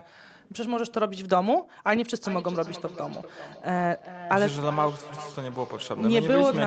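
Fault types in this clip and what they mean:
Feedback echo between two devices: from 2.24 s, a second device replays this microphone's audio and it is picked up again, returning roughly every 0.4 s at about -14 dB.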